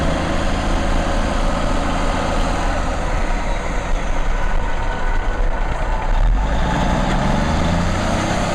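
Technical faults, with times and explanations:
Throughout: hard clipping. The louder moments carry a gritty distortion, because the signal was driven about 9 dB beyond what a stage could pass, so roughly 7 percent of the waveform had its peaks sheared flat, and those flat tops add harmonics high up the spectrum.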